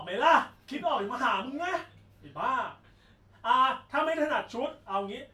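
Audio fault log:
No fault is heard in this speech clip.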